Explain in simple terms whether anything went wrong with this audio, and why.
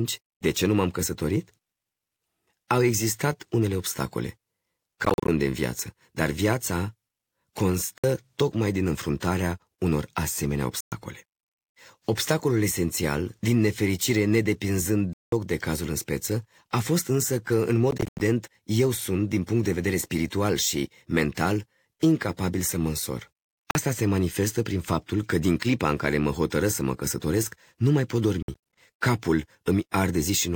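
The speech cuts to silence several times, at 5.05, 7.98, 10.80, 15.13, 17.91, 23.71 and 28.42 seconds, each gap under a fifth of a second, and some come as scattered bursts. These are Bluetooth dropouts, likely caused by wireless packets arriving too late. Unlike a stutter, the speech resumes further along, as if it had continued unheard.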